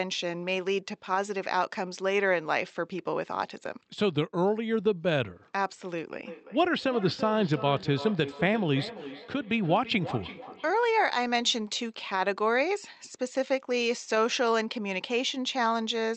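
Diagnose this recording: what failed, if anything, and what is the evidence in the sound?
Call processing: feedback echo between two devices, 6.24 to 10.97 s. Speech returns roughly every 300 ms, peaking about 13 dB down, because each echo canceller ignores the other device's playback.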